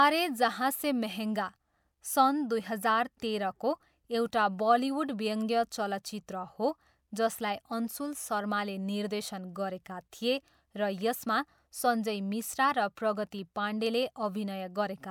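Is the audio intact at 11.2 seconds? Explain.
Yes, the speech at 11.2 seconds plays through intact, with no audible dropout, click, distortion or other fault at that moment.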